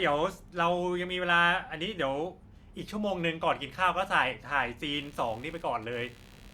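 From 4.94 s to the end at 6.54 s, computer activity noise rises under the speech: a rapid buzzing chirp pulsing at roughly 70 Hz, about 25 dB below the speech. Processor or peripheral load is modulating the shared ground feeding the audio circuit.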